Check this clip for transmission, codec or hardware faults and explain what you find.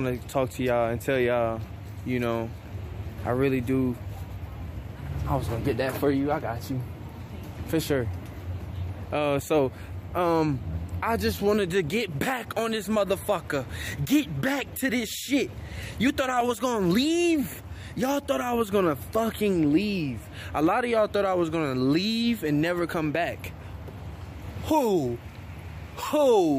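One transmission-side fault. At 16.41 s a brief click or buzz marks a repeated buffer: a roughly 1.45 ms chunk, fitting a 64-sample buffer, replays twice when new audio arrives late.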